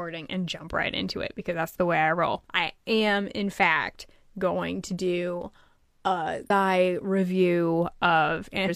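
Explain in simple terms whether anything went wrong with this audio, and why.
Two brief glitches interrupt the speech: one at 6.46 to 6.51 s, right after "going to do a", and another at 8.64 to 8.70 s. Both come from damaged data in a compressed stream. Parts of the file were corrupted, so the decoder misread those frames and briefly lost its place.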